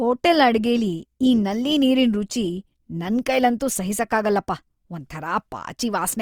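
From start to finish the speech carries plainly audible Opus compression damage. The highs reach up to about 20.3 kHz, so the band is not narrowed. The texture suffers instead. Voiced sounds turn noisy, rough and grainy. The cause is likely an encoder in its music mode, keeping each band's energy but filling starved bands with folded or noise content. That points to a low bitrate near 24 kbps.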